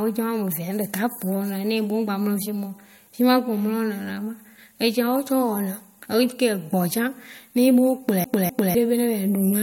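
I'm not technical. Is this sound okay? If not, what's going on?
No. Near the end, from about 8.24 to 8.75 seconds, the speech starts to stutter. This is a CD stuck on one turn. A scratch on the disc makes the player jump back to the same spot each time the disc comes around. So a quarter-second piece of speech, about 0.25 s long, plays again twice, with a tiny silent gap at each jump. It sounds like a quick, even skip.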